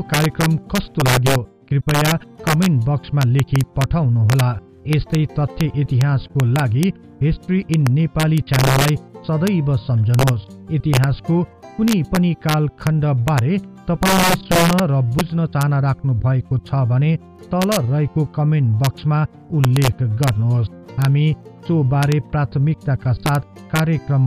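The audio carries integer overflow from start to finish. Its loudest peaks crack violently instead of flattening out. The signal runs about 3 dB past the integer ceiling. Those peaks are not held at the limit. They wrap around to the opposite extreme of the range. Each wrapped sample jumps across the full scale, so every peak over the limit throws a sharp snap. It is harsher than ordinary clipping. Under one percent of samples go over, so the cracks cluster only on the peaks.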